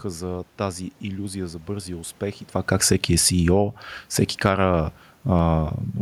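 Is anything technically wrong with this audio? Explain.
Yes, the level control is pumping the speech around. There's automatic gain falling twice. The first starts at 2.57 s, right after "за бързия успех и", and runs to 3.68 s, pulling the level down by about 7 dB. The second is shorter, from 4.3 to 4.61 s, dropping about 6 dB. In both cases the AGC decided the input was too hot and eased its gain down over that stretch, so the speech and the room noise behind it sink together. That shared drop is the giveaway: the background moves with the voice.

Then there's automatic gain rising, from 4.54 to 5.7 s, overlapping the tail of that second dip. The AGC now judges the input too quiet and brings its gain back up by about 4 dB over a bit more than a second. You hear speech and room noise swell together rather than the talker simply getting louder. Just before the first dip, around 2.5 s, the talker shifts position relative to the mic. 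That's ordinary movement, not a fault, but it's probably what nudged the AGC into reacting.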